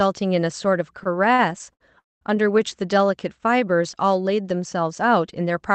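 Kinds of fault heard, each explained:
Repeated stalls (stutter): Between 1.03 and 1.82 s the speech catches four times. Packets arrived too slowly, so the jitter buffer kept emptying, and the receiver stretched the last sound over each wait. The fills total 142 ms, the longest is 65 ms, and they cover about 18% of that stretch. Nothing is dropped; the speech just drags. A spectrogram shows short smeared, repeated frames breaking the harmonic pattern, and the waveform shows brief looped segments.
Call audio freeze: From 2.00 to 2.37 s the speech stops and resumes where it left off, with 211 ms inserted and nothing lost. Almost all of that, 200 ms, is silence after a brief decaying continuation of the last sound. Everything afterward arrives 211 ms later than it would have. The cause is likely packets held up in transit, which emptied the jitter buffer. The waveform shows a flat gap after a short fading tail. 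The spectrogram shows a blank column below the call codec's 8 kHz ceiling.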